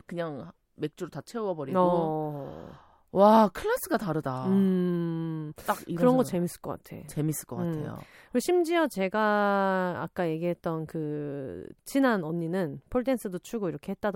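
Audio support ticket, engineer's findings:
Engineer's findings: no fault found in the speech audio.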